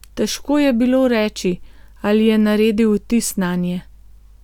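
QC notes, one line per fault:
Nothing to flag here; I listened all the way through and heard no faults worth a QC line.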